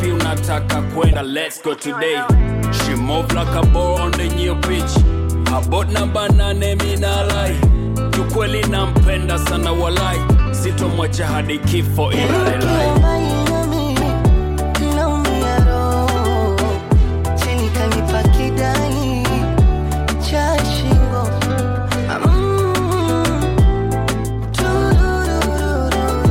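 At 1.09 to 1.15 s and again at 13.98 to 14.03 s, damaged data in a compressed stream makes the decoder misread corrupted frames and lose sync, producing a brief glitch of about 50 ms. A spectrogram shows a sudden break, and the waveform shows an abrupt discontinuity.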